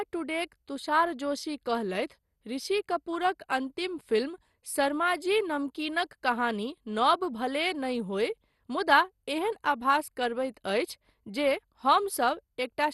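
Speech throughout has plainly audible MP2 compression, likely from an encode near 64 kbps: dull and gurgling, with the spectrogram empty above 12.2 kHz.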